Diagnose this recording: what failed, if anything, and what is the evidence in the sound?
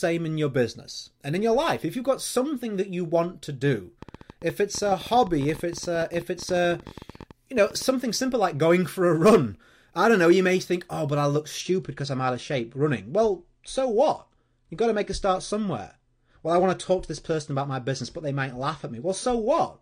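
A train of clicks runs from 4.03 to 7.83 s: about fifty sharp ticks at roughly 15 per second, irregularly spaced, peaking at about the level of the speech and audible in pauses too. The likely cause is a faulty connection or power supply, or interference from nearby equipment, injecting repeated similar pulses.

From 11.60 s to the end, the adaptive stream switches to a lower bitrate. Treble above 9.8 kHz vanishes abruptly with no gap, and the speech takes on coarser, smeared codec artefacts. This points to the player dropping from a 96 kbit/s to a 32 kbit/s AAC rendition after the network slowed.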